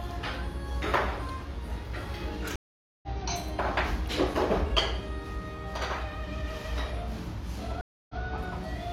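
At 2.56 s a stream reconnect breaks the sound. The connection dropped, giving 470 ms of silence. A fresh decoder then resumes about 0.4 s further on. A second reconnect at 7.81 s leaves 281 ms of silence, then restarts 93 ms earlier, briefly repeating sound.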